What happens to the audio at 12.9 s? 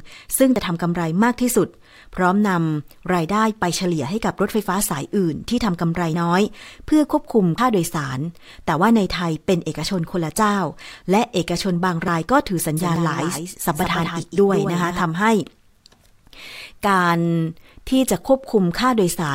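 At 12.77 s a doubled audio track begins and runs to 15.01 s: a full-band copy of the speech trails the original by roughly 150 ms, about 5 dB quieter and dry, likely from a second, slower capture path. It switches on abruptly. A spectrogram shows every formant pattern repeated a short step later, and the waveform shows a smeared double envelope.

Inside that span, at 12.96 s, there is a dropped buffer (overrun). Around 40 ms of audio vanishes and the two sides are spliced directly, with no gap of silence. It is heard as the sound jumping ahead, likely because samples were overwritten before being read. The waveform shows a sharp discontinuity, and the spectrogram a thin vertical broadband line.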